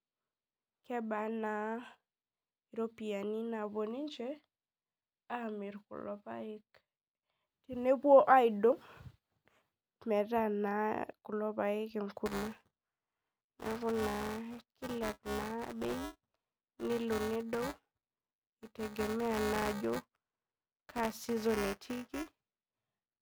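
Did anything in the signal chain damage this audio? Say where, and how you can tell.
Yes. From 12.26 s to the end, the speech carries a steady robotic 345 Hz buzz. This is buffer tearing at the driver stage. Writer and reader cross every period, splicing in a small slice of audio from roughly 10 ms earlier, and the 345 Hz buzz fits a 128-sample buffer.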